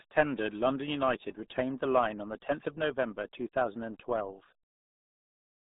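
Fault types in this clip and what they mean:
RealAudio 14.4 codec: a dial-up era speech coder squeezing audio to a rate that fits 8 kbit/s. The speech spans only about 150 Hz to 3.7 kHz, with nothing above 3.8 kHz, and sounds muffled and gargly throughout. Unlike plain telephone band-limiting, heavy coding damage smears the sound itself.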